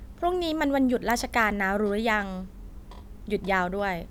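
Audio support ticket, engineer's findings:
Listened to the whole speech clip and nothing jumped out, so no findings to log on this one.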